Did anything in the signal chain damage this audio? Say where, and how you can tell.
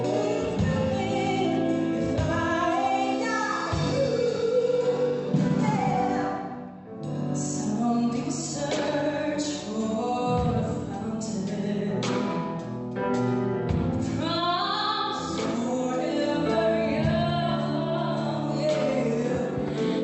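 No, nothing in the chain damaged this audio; it came through an Opus call path doing its ordinary job, with the top end rolling off around 8 kHz as you'd expect from that codec setting.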